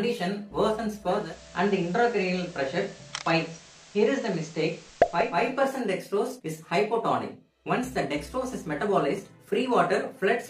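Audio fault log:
1.02–5.47 s, digital radio blending to analogue: the receiver loses the digital stream and cross-fades over about 390 ms to the FM broadcast of the same station, then fades back at the end. While on FM, a bed of hiss appears roughly 25 dB under the programme. The level itself holds steady across both transitions.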